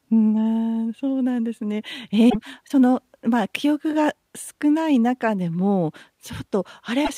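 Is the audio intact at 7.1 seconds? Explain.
No. From 7.04 to 7.10 s the speech skips ahead with a brief glitch. A likely broken MP3 bit reservoir is to blame: cut frames leave following 26.1 ms frames decoding borrowed bytes wrongly.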